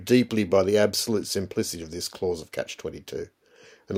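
A speech recording with no audible technical faults.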